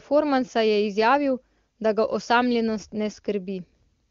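Nothing goes wrong anywhere in this bit of speech; it comes over an AMR wideband (HD Voice) link at 23.85 kbit/s, the codec's top rate, where any coding trace is faint at most.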